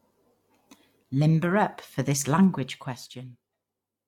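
Zipper noise runs from 2.41 to 3.50 s in this speech clip, as the level drops by roughly 15 dB in unsmoothed 1 dB steps, about fifteen a second. Each jump leaves a small click, so a ticking zip rides on the fade.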